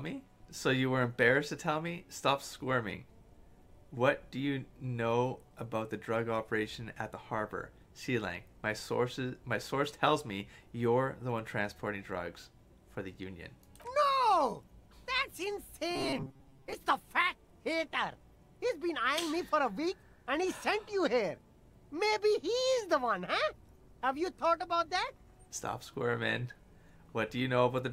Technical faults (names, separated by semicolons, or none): robotic sound from repeated short buffers